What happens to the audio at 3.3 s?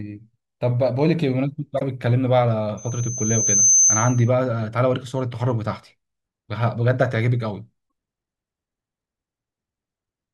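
A piercing 6.2 kHz tone swells over about a second to roughly 5 dB above the speech, from 2.77 to 4.30 s: loudspeaker feedback squeal, where the microphone re-amplifies its own loudspeaker until that frequency runs away.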